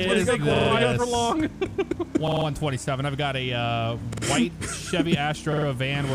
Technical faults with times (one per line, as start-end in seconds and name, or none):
0.56-0.70 repeated buffer
2.28-2.46 repeated buffer
4.13-4.23 repeated buffer
5.53-5.67 repeated buffer